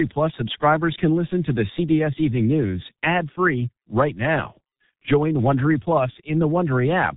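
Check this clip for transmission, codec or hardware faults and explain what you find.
The speech carries heavy G.723.1 codec damage from start to finish.

Throughout the clip, nothing is present above 3.8 kHz, and the sound is muffled and hoarse, with smeared consonants. G.723.1 models the voice in 30 ms frames and refreshes that model slowly, so fast changes between sounds blur together and the excitation takes on a rough, buzzy quality. The degree of damage points to a bitrate around 6 kbit/s, the codec's higher mode, though it still strips much of the detail.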